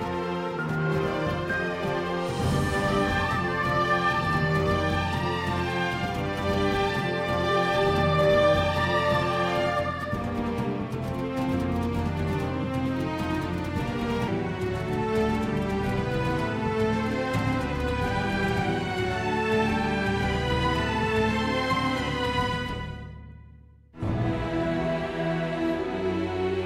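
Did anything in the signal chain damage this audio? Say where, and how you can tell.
Yes, a section at the wrong speed from 0 to 14.28 s runs 1.2 times fast, pitched up about three semitones, likely a playback or editing clock mismatch.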